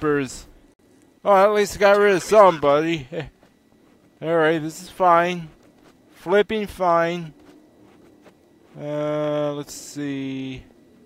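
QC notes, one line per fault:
0.74–0.79 s, repeating every 10 s: gap at a join of encoded pieces. About 55 ms of silence with smeared edges, from untrimmed encoder delay and end padding.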